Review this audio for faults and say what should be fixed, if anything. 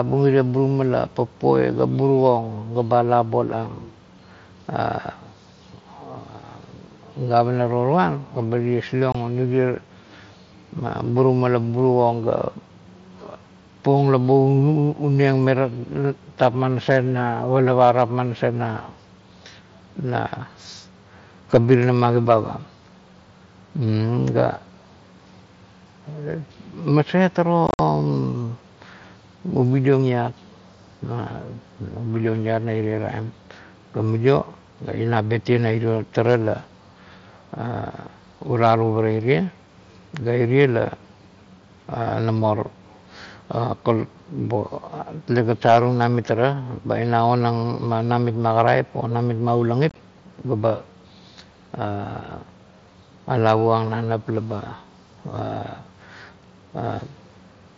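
You'll hear unconcealed Bluetooth headset packet loss three times: a 22.5 ms hole at 9.12 s, a chopped, crackly stretch from 27.67 to 27.79 s, and a rough patch from 49.89 to 49.96 s. Lost packets became silence or an idle pattern, leaving abrupt gaps. Keep the phone close to the headset, away from Wi-Fi congestion, or use a link that conceals lost packets.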